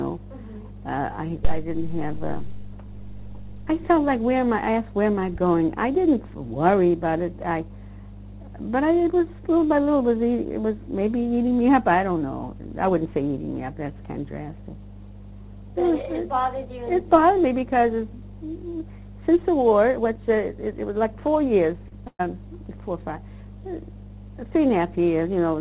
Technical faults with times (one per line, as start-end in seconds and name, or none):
0.00-25.60 mains hum
21.88-21.94 short concealed packet loss
22.07-22.22 burst of packet loss